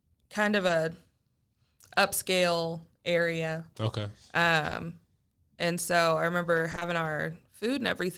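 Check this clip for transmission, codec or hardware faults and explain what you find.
Short concealed packet loss occurs at 0.67–0.71 s after "kind of", at 4.69–4.73 s, and from 6.71 to 6.83 s after "and so I remember". Audio never arrived in time. The receiver extended the previous sound, then blended back. Each gap is a brief smear or wobble.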